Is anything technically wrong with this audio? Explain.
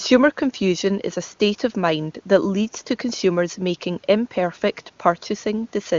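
No, nothing is technically wrong with this audio.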